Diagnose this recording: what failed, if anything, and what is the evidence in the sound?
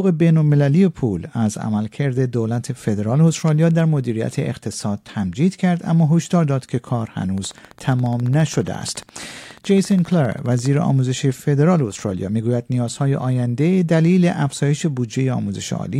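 A train of clicks runs from 7.38 to 10.67 s: around fifty near-identical pulses at a steady 14.6 per second, peaking roughly as loud as the sound itself and carrying on regardless of what the audio is doing. The fixed shape and even spacing point to a periodic source, most likely electrical interference coupling into the analogue wiring or a struggling interface. Random crackle from a dirty contact would be irregular, and buffer dropouts would leave gaps rather than add pulses.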